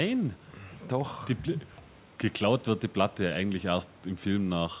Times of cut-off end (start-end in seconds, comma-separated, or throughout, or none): none